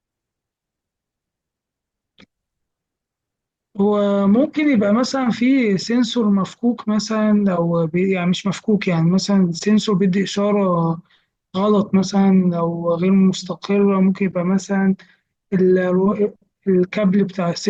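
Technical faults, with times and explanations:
No technical faults can be heard anywhere in this recording.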